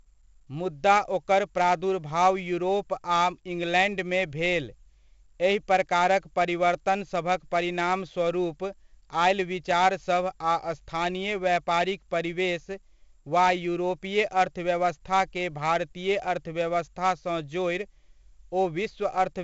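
Throughout the speech, 4-bit ADPCM compression leaves a gritty hiss riding on every loud syllable and roughens sharp onsets where the adaptive step lags. Nothing is heard above 7.8 kHz, which fits a 16 kHz sample rate at around 64 kbps. The damage is heavy.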